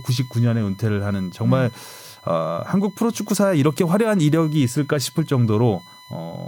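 A speech recording carries USB whine for its whole length: a fixed-pitch tone at 1 kHz with harmonics, strongest at 4 kHz, sitting roughly 30 dB below the speech. It comes from current drawn in the bus's 1 ms frames leaking through power or ground, and shows as steady horizontal spectrogram lines through every pause.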